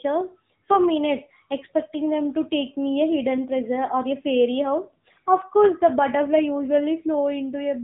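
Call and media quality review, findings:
AMR narrowband mobile codec on speech, whole clip. Band-limited, buzzy, synthetic timbre; plainly audible codec damage. Nothing above 3.8 kHz: spectrogram shows hard ceiling, empty band above, smeared harmonics below. Consistent with AMR-NB at low mode, fits roughly 8 kbps. Mechanism: 8 kHz sampling, vocal-tract model excited by sparse pulses per 5 ms subframe, 20 ms frames.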